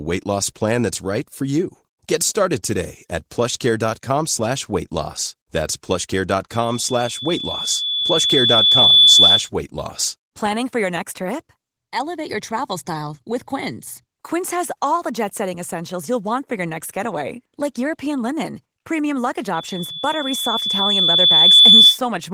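At 6.52 s a loudspeaker feedback squeal sets in: the microphone hears its own loudspeaker, and at 3.5 kHz the loop gain tops one, so that tone feeds itself and swells over about three seconds to roughly 15 dB above the speech before breaking off at 9.50 s, just ahead of "weight loss". After "linen premium luggage" it returns from 19.55 to 21.99 s, climbing faster, in about two seconds. A spectrogram shows a bright horizontal line at 3.5 kHz thickening over time, and the waveform envelope fattens.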